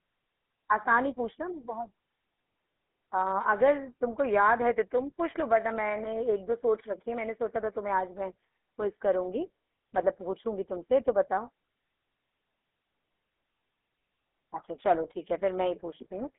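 Speech runs through the GSM full-rate codec for the whole clip. The band is narrow, roughly 250 Hz to 3.5 kHz, and nothing reaches above 3.8 kHz. The codec models the vocal tract and excites it with evenly spaced pulses, keeping only a third of the excitation samples. That coarse excitation makes the voice plainly buzzy and gravelly throughout. The sound fits the old 13 kbps full-rate mode.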